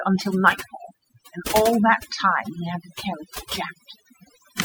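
A speech recording with overdone noise removal throughout: pauses collapse into near silence with twinkling specks, unlike gating, which simply mutes the pauses.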